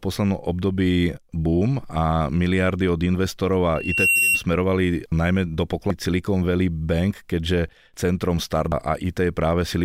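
Loudspeaker feedback squeal runs from 3.75 to 4.44 s: the microphone picks up its own loudspeaker, and at 2.7 kHz the loop gain climbs past one. A steady tone swells over a few tenths of a second until it sits several decibels above the speech.

Damaged data in a compressed stream strikes from 5.90 to 5.94 s, just after "najmä do", and again from 8.72 to 8.75 s, after "keďže centrom". Corrupted frames make the decoder lose sync and hunt for the next header, leaving a brief glitch each time.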